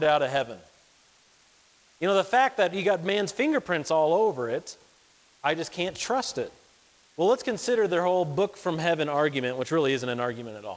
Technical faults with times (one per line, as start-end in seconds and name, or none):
0.00-10.76 low bit depth with dither
0.00-10.76 clock drift between sender and receiver
0.08-10.52 repeated timing corrections